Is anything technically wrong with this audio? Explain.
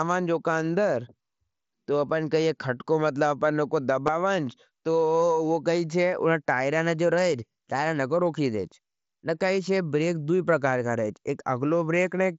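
Yes. Concealed Bluetooth headset packet loss occurs twice: at 4.07 s, just after "मतला अपन नो को", and at 7.21 s, between "उनना टायरा ने जो" and "टायर नको रोखी देज". Voice packets between headset and phone went missing, and the receiver filled each gap by repeating the closest-matching stretch of recent waveform. The gaps are about 15 ms and 7.5 ms, which fits two lost frames and one. Both are brief gaps on the mSBC wideband link.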